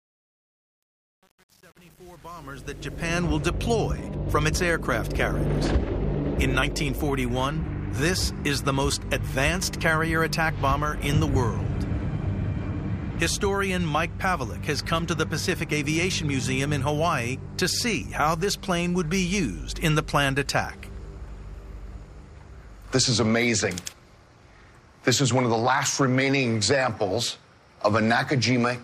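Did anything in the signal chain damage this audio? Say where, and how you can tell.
Yes. Truncation distortion on the fade-in, 0.0 to 3.21 s: the quiet start sounds gritty, which fits an undithered 8-bit gain stage quantising the low-level waveform.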